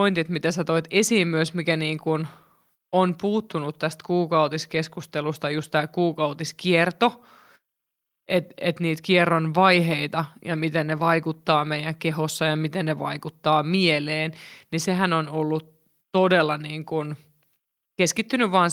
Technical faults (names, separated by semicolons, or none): none